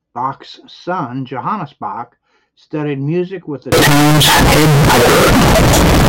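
At 3.72 s, 32-bit float samples are most likely being read as 32-bit integers, a float read as integer fault that lasts to the end of the speech. Each sample's value is then set by its sign and exponent bits rather than by the actual level, so the waveform turns almost square at an almost fixed, high level. The result is suddenly very loud and harsh, with background noise as loud as the speech, though pitch can still be followed.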